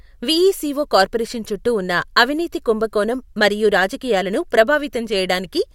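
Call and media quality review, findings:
No faults found in the speech signal: level, timing and continuity hold steady throughout, with no dropouts, distortion or processing problems detected.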